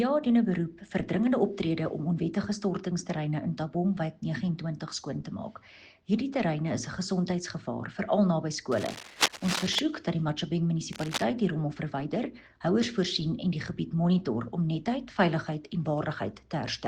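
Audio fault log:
8.72 to 9.79 s and 10.93 to 11.24 s, cable scratch noise. Dense, ragged bursts of crackle and rustle sit over the sound. The first lasts about a second and comes close to the level of the sound itself. The second is shorter and clearly quieter. The likely cause is a worn cable or connector being moved, so its contact resistance jumps about quickly and lets through uneven noise while it shifts.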